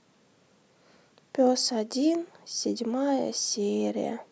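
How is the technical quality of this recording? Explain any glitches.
The technical quality of this recording is sound, with no glitches to explain.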